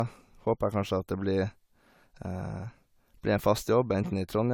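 Throughout, the speech has a swirly, hollow quality with smeared consonant attacks, worse than a clean 96 kbit/s AAC encode would give, though content reaches up to 20 kHz. This is likely generation loss from about four successive AAC-LC re-encodes, each requantising on a shifted frame grid.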